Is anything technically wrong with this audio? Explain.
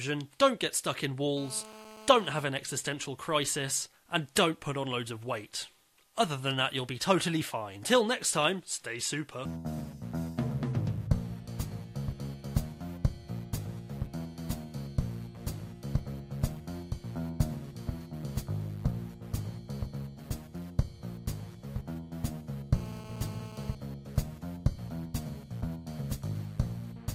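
Yes. GSM phone buzz appears from 1.37 to 2.44 s and again from 22.74 to 23.75 s. A nearby 2G phone on a call transmits in bursts near 217 Hz. The audio circuit rectifies them. The result is a hard, raspy, harmonic-rich buzz, steady throughout each burst, about 16 dB below the signal.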